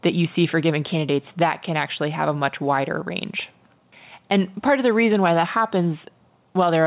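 A speech recording with gain pumping throughout: the gain swings by around 5 dB, so levels sound squashed. On a waveform, the envelope looks flattened. The likely cause is input gain set far too high, with a fast limiter pulling it down on every peak. The spectrogram also shows nothing above 4 kHz, which fits the narrowband G.711 call path.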